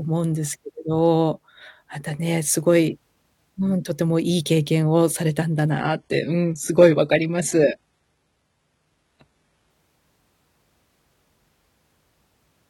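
Speech, with an adaptive stream at a lower bitrate from 5.70 to 9.70 s: treble abruptly thins and turns synthetic without a gap, consistent with a low-bitrate HE-AAC fallback.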